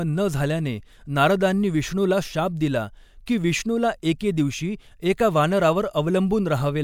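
Speech with pre-echo at 3.26 s and 4.19 s: a transform codec spreads block quantisation noise backwards, so hiss of about 13 and 17 ms precedes each attack, softening it.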